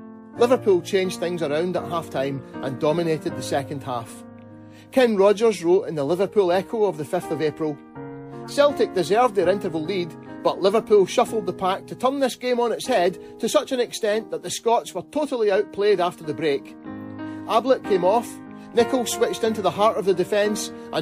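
A short blip of misplaced noise cuts through the sound from 8.44 to 8.51 s, peaking at about -25 dBFS. This is a corrupt frame decoded: damaged bits in what sounds like a single compressed frame were played anyway, scattering energy into wrong frequencies.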